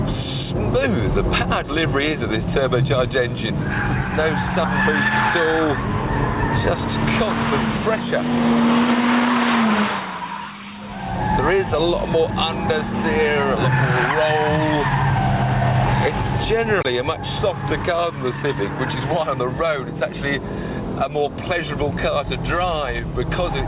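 No technical faults are audible anywhere in the recording.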